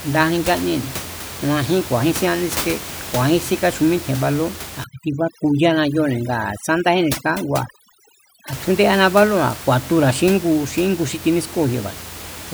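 Speech recording with room noise sitting about 13 dB below the voice, and from 4.84 to 8.53 s overdone noise removal: bands near the estimated noise floor are cut so hard that the background drops and breaks up into twinkling specks.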